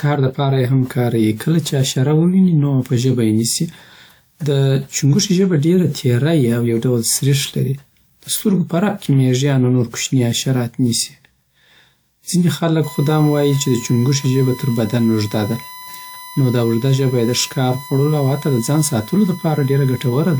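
From the start, the speech sounds swirly, smeared and hollow. Consonant attacks blur. This is generation loss, likely from repeated lossy decoding and re-encoding, perhaps five passes, with a WMA-like character near 128 kbit/s. Each pass re-quantised on a shifted frame grid, so noise piled up. Content stops near 20.1 kHz.

At 12.84 s, just after "ځینې خلک", a USB whine appears and lasts to the end. It is a fixed 1 kHz tone, about 20 dB below the speech. The bus's 1 ms frame rhythm leaked into the audio through power or ground.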